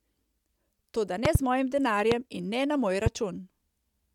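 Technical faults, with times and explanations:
1.25–1.38 s, 2.12–2.14 s and 3.06–3.09 s, loud pop: sudden voltage pulses, likely from static or a switching glitch, hit the signal, giving sharp pops about 15 to 20 dB above the speech, a double pop before "z mojim", then single ones after it and after "in ne na moj".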